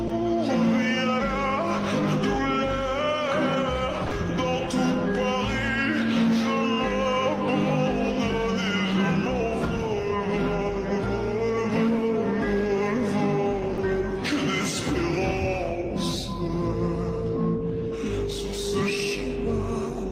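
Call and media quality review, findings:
Short gaps filled with steady noise at 0.07 s, 4.07–4.11 s and 13.73–13.77 s (20–40 ms): sound dropped by the voice detector, likely Opus DTX halting transmission.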